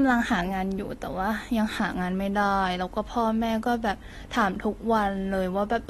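From start to end, the speech carries AAC compression damage. Nothing sounds above 12.4 kHz, leaving it dull, with smeared, warbling sibilants. This likely points to a low bitrate.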